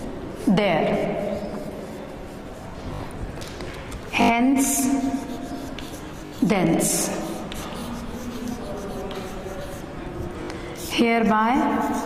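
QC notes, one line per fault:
0.98–1.02 s, 2.94–3.00 s, 4.22–4.30 s, 6.26–6.32 s, 10.44–10.48 s: repeated buffer. At each point a roughly 20 ms slice of audio plays two to four extra times in a row. The longest run is at 4.22 s, and the shortest are at 0.98 s and 10.44 s. New data missed its deadline, so the device replayed the last block, which fits a 20 ms buffer. Each repeat restarts with a hard join, so the runs come across as a brief buzzy stutter. Nothing seems to be dropped.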